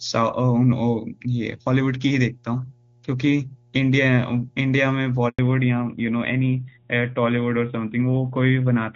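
A steady mains hum at 60 Hz runs under the speech from start to finish, sitting roughly 35 dB below it. Some ground loop or nearby transformer is leaking power-line current into the signal path, so a faint low drone persists even in pauses. On a spectrogram it is a thin, unbroken horizontal line at 60 Hz, perhaps with weaker lines at low multiples, and in a zoomed waveform it shows as a slow, regular ripple across the quiet stretches.

At 5.29 s a handover gap cuts the speech out for 100 ms, until 5.39 s. The call was passed from one network link to another and no speech frames came through during the switch, so the sound fades within a few tens of milliseconds and then drops to nothing until the new link picks up. The waveform shows a short flat stretch, and the spectrogram a clean vertical blank band across all frequencies.

Right after the gap, from 5.39 s to the end, there is a fallback to narrowband. 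The call leaves the wideband HD Voice codec, which up to that point carries content into the upper range, and switches to an older narrowband coder. Nothing above 4 kHz survives, so sibilants and breath lose their edge and the speech sounds duller, boxier and rougher. On a spectrogram the energy above 4 kHz stops abruptly at the gap, leaving a hard ceiling for the rest of the clip.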